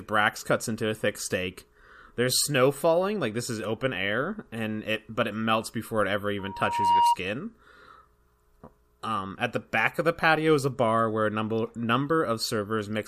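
Speech clip with a loudspeaker feedback squeal from 6.39 to 7.17 s, right after "melts before it ever": a 945 Hz tone swells over roughly half a second to around 5 dB above the speech, appearing on a spectrogram as a bright horizontal line.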